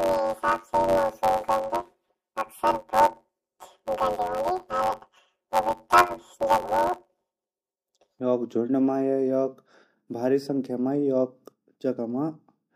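From 0.0 to 8.21 s the speech carries a robotic buzz at about 92 Hz with no clear octave shift, clearing just before "झुंड मा या". This is planar audio read as interleaved: each 10.88 ms block of left-then-right samples is taken as alternating pairs, so the two halves play back-to-back at double speed.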